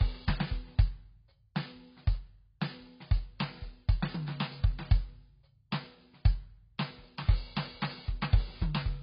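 AAC compression runs throughout: nothing above about 5.2 kHz survives, and the music sounds dull, smeared and warbly, with fizzy sustained tones. This is likely heavy AAC-LC coding starved of bits, which fits a bitrate around 16 kbps, forcing a low cut-off and coarse quantisation.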